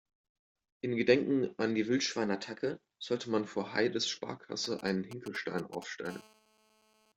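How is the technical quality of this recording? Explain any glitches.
The recording has three clear glitches: one pitch-and-speed jump and two kinds of mobile-phone interference.

From 2.12 to 3.20 s, between "an die" and "man vor", the speech suddenly runs about 6% fast and rises by about a semitone (103 cents), then snaps back. This is a drift correction step, likely from clock-matching software abruptly changing the playback rate to rebalance its buffer.

From 4.64 to 6.07 s, a galloping dit-dit-dit of brief rasping buzzes sits roughly 15 dB below the speech. These are GSM signalling bursts: a nearby 2G phone sends short groups of 217 Hz radio bursts, and the audio circuitry rectifies them into sound.

From 6.09 to 7.12 s, the interference becomes a steady, harsh 217 Hz buzz full of harmonics, about 27 dB below the speech. This is GSM phone buzz. The phone has entered a call and transmits continuously in 217 Hz bursts, which the electronics demodulate.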